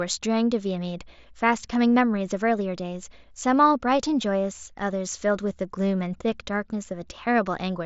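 There are no technical faults to describe in this speech clip, which comes through the Bluetooth mSBC headset path as expected for that wideband codec.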